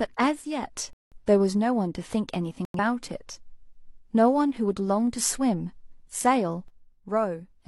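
From 0.42 to 0.63 s the speech level falls abruptly by about 6 dB, likely because one channel drops out before the mono sum. Corrupt frames are muted at 0.93–1.17 s and 2.65–2.79 s. The decoder rejected damaged frames there, so each gap is a sudden silent hole, four frames long and then two, and timing stays intact. The same 6 dB drop, likely from one channel dropping out, returns at 6.68 s and lasts until the end.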